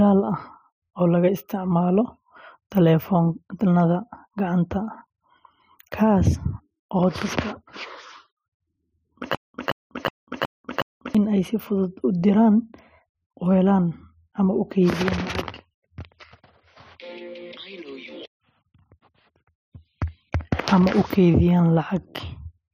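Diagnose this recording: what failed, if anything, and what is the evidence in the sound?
From 9.35 to 11.15 s the speech breaks into a stutter with silent gaps: a 173 ms burst repeats five times, each followed by about 195 ms of digital silence, for an even 368 ms period. This likely points to a stalled playback buffer or stream that replayed its last fragment on each retry and then ran dry. On a waveform it shows as identical blocks separated by flat silent stretches. A spectrogram shows matching vertical slices with blank columns between them. The speech that should have filled that span is gone.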